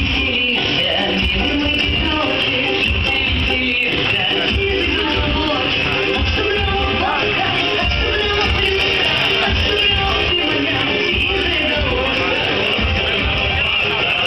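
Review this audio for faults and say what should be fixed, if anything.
From 8.28 to 10.28 s, pre-emphasis is left on. The 50/15 µs treble boost was never undone, so highs rise about 8 dB at 10 kHz, sounding thin and bright. Apply the matching de-emphasis on playback whenever the emphasis flag is set.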